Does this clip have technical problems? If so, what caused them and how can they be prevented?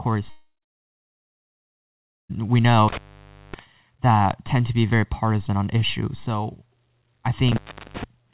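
Yes. From 0.3 s to 2.31 s the speech stops: a short, fading continuation of the last sound is followed by about 1.8 s of silence, and the audio resumes at "we know" with roughly 2 s of material simply gone. This is likely a long network dropout, where packets stopped arriving, the receiver briefly concealed the gap by extending the last sound, then gave up and played silence until the stream recovered. Prevention: use a more stable connection (wired rather than congested Wi-Fi) and enable redundancy or forward error correction on the call link.

Two intermittent contact faults follow. The first runs from 2.88 s to 3.63 s, just after "we know" and before "that tend to be", with the line open for about 0.56 s. The second runs from 7.48 s to 8.04 s, open for about 0.38 s. In each, the signal cuts out with crackle at the break and reconnect, leaving only faint hiss while the circuit is open, which is how a loose plug or a cable with a failing conductor behaves when it is moved. 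The audio also passed through a G.711 mu-law call path, so nothing above 4 kHz is present. Prevention: reseat or replace the microphone cable and connector, and secure the cable so it cannot flex at the plug.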